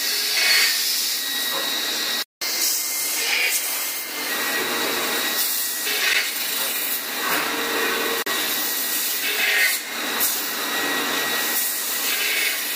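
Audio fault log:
2.22 to 2.42 s, playback stall: the sound just stops mid-flow for about 190 ms and then picks back up. That's the output sitting empty while nothing reached it, likely because the player ran dry of data or its playback thread got blocked for a moment. It's long enough to register as a clear dropout, not a tick.
2.42 to 4.29 s, catch-up at higher speed: right after the stall the player runs its backlog at 1.1 times speed, resampling to do it, so pitch climbs along with tempo, by about a semitone and a half. It holds that for just under two seconds to claw back the lost time, then settles back to normal speed and pitch at 4.29 s.
5.85 to 5.88 s and 11.55 s, damaged data in a compressed stream: two brief disruptions, the first about 20 ms and the second shorter still. Some bytes in the compressed stream were wrong at those spots, so the decoder misread or refused the frames there, lost sync and had to hunt for the next frame header. 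What comes out is a quick chirp, squawk, click or tiny hole rather than clean audio.
6.13 s and 8.22 to 8.26 s, block of digital silence: zeros were played where audio should be, typically from a buffer not filled in time or from a calculation producing invalid numbers. There's no fade in or out, so the cuts are abrupt. The 10 ms block at 6.13 s is too short to hear as silence and comes across as a tick or dip. The 40 ms one at 8.22 s is a short, audible hole.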